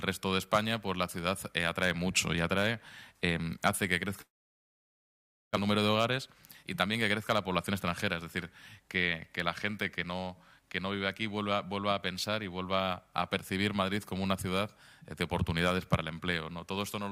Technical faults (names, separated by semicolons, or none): long network dropout; jitter buffer speed-up